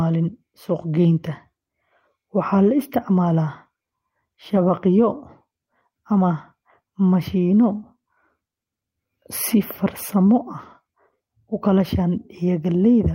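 Nothing stood out on listening to the speech here.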